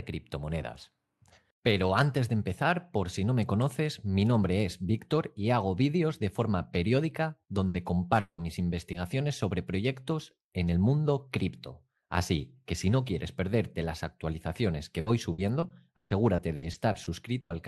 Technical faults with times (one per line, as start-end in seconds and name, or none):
7.67-7.77 burst of packet loss
7.74 lost packet rebuilt from error correction
8.20-8.41 long network dropout
8.38 lost packet rebuilt from error correction
8.92-8.97 short concealed packet loss
8.94 lost packet rebuilt from error correction
15.00-17.52 repeated packet loss (robotic sound)